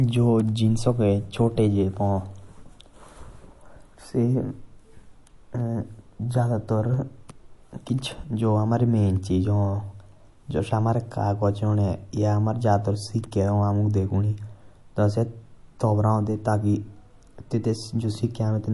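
From start to finish the speech shows plainly audible damage of the kind MP3 compression leaves, and that is the likely cause. The treble has a watery, swirling quality as weak frequency lines flicker in and out between frames, with chirpy s sounds and softened attacks, which fits a low bitrate near 48 kbps. A simple low-pass filter would dull the top just as cleanly but leave no such swirl.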